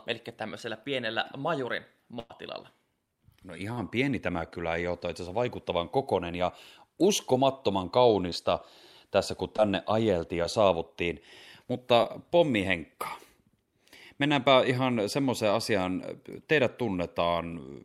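At 2.19 to 2.31 s, just after "eli tämmöisellä pienellä majurin", a burst of packet loss drops about 100 ms of the speech stream. The receiver bridges the hole by extending the last sound it had and fading it down across roughly a tenth of a second, with no true silence. The result is a smeared, dying continuation, after which the speech jumps ahead with that stretch missing.

Five short concealed packet losses follow. The receiver patches them by extrapolating the preceding sound and blending back into the real signal. At 3.73 to 3.78 s, about 40 ms goes missing just before "pieni tämä kylä ei". Smaller losses of 10 to 20 ms fall at 8.30 to 8.32 s, right after "vaikuttavan kokonen ja uskomattoman", and at 9.56 to 9.59 s, 10.43 to 10.45 s and 12.03 to 12.06 s. Each is heard as a quick smear or wobble in the speech.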